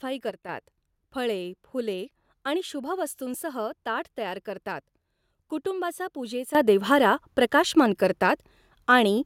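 At 0.30 s the speech and its background noise drop together by about 6 dB, snapping back at 0.49 s; from 6.55 s to the end both leap up by about 12 dB. Each is a sudden gain jump, likely digital gain switched between samples without a ramp.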